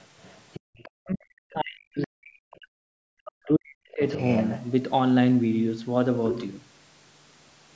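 A speech clip with several echo-canceller faults. The other side's voice leaking through can be heard at 0.23 to 0.35 s, 0.54 to 0.60 s, 0.78 to 0.90 s, 2.51 to 2.57 s and 4.09 to 4.61 s. Most of these scraps sit far below the talker, roughly 25 to 35 dB down. The last one is much stronger, only about 15 dB under the speech. The likely cause is a loudspeaker on the talker's device feeding the microphone, with the canceller failing to subtract all of it.

From 0.60 to 0.75 s the background is gated by the echo canceller. The room sound falls away by about 37 dB for around 150 ms, then comes back. The canceller clamped the microphone hard while the loudspeaker was active.

Speech is suppressed in double talk from 1.03 to 4.01 s. For about three seconds the talker's own voice dips, at worst by around 40 dB. This is likely the canceller treating both voices as echo while the two sides spoke at once, and turning everything down.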